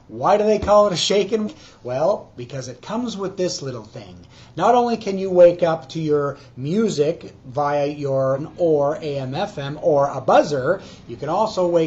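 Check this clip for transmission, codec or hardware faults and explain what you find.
Two short glitches stand out, both from damaged data in a compressed stream. The first runs from 1.43 to 1.49 s, the second from 8.34 to 8.39 s, lasting about 58 ms and 44 ms. In each spot part of the encoded stream is corrupted, so the decoder misreads those frames, loses sync and hunts for the next valid frame header. That shows up as a brief chirp, squawk, click or short hole that cuts across the sound.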